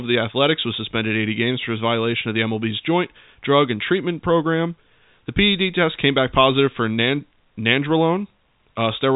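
There are no technical faults to describe in this speech, which comes over G.711 telephone coding with nothing above 3.8 kHz.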